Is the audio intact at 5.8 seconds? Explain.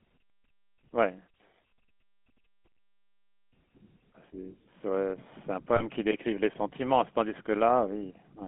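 No. Lost GSM frames hit from 5.76 to 5.82 s, a gap of about 40 ms, which fits two 20 ms frames. The decoder filled it by repeating the last good frame's settings, so the sound turns briefly rough and metallic instead of continuing cleanly.

The GSM full-rate codec also affects this moment, as it does the whole clip. The speech is squeezed into a line band of roughly 200 Hz to 3.4 kHz and rebuilt from a coarse, pulse-driven excitation, which fits 13 kbps GSM full rate. The result is a plainly audible buzzy, gravelly roughness.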